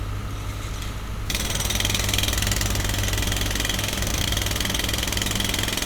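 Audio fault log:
4.09–4.26 s processor overload crackle: missed deadlines in quick succession skip tiny slices of sound, fitting roughly 5 ms buffers, heard as gritty tearing rather than one clean dropout.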